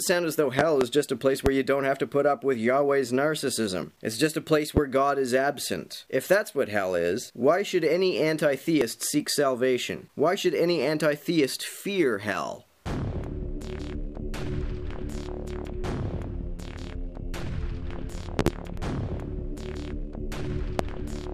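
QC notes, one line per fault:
0.59–0.85 s (two pops), 1.46 s, 4.77 s, 18.39–18.50 s (two pops), 20.79 s: loud pop. Sharp pops about 20 dB above the sound, which carries on underneath, likely from a voltage pulse such as a plug, switch or static discharge. They appear as tall narrow spikes on the waveform and thin broadband vertical lines on the spectrogram.
8.81 s, 13.79 s, 18.77 s: audio missing between chunks. Brief skips about 5 s apart, each dropping around 20 ms, with the two sides butted together without silence. This likely comes from processing in 5-second chunks. Each shows as an abrupt step in the waveform and a vertical seam on the spectrogram.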